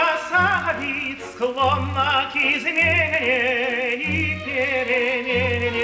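Throughout the clip, a resampler restarted on every block leaves a buzz at 50 Hz. Each 20 ms block was converted separately, likely from 44.1 kHz down to 16 kHz, so every edge carries a small error. Unlike mains hum, the buzz vanishes whenever the sound stops.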